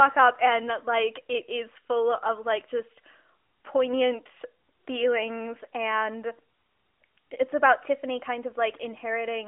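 Nothing in this speech recording stands out as a technical fault at any point.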